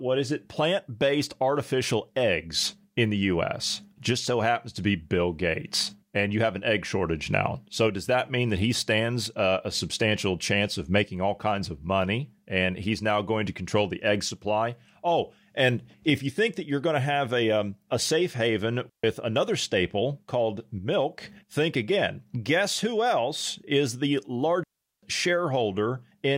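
At 18.89 s, after "um a safe haven", a digital wireless dropout mutes the speech for about 0.14 s before "another staple called milk"; at 24.64 s, after "who else is the", a second lasts 0.39 s. Each is a clean near-silent gap, a flat waveform and empty spectrogram column with no noise burst at either edge.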